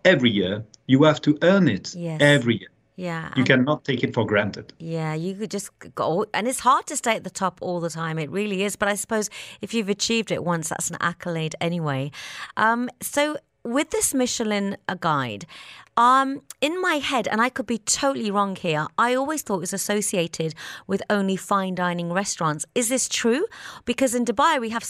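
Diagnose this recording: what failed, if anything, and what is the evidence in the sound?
Nothing failed; no fault can be heard in this speech.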